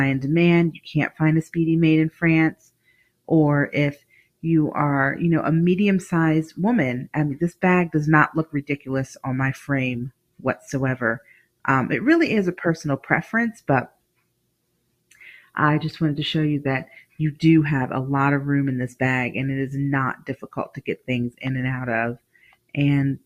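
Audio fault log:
Throughout: noise suppressor applied to music or sounds. A speech-tuned suppressor keeps mistaking sustained material for noise, so the level swings by roughly 10 dB and the sound pumps and thins.
0.74–4.44 s, 7.52–11.64 s, 13.56–15.56 s, 17.02–17.19 s, 20.16 s to the end: sound cut by the noise suppressor. Held tones and decays get dragged down as much as about 21 dB (about 19 dB at 17.02 s) while attacks slip through, so tails are cut short.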